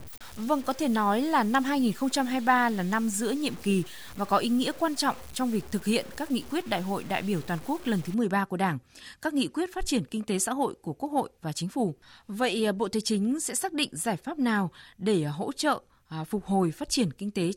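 From 0 to 8.1 s the speech sounds gritty, with grainy distortion tracking it about 20 dB down: low bit depth without dither, likely 6-bit truncation.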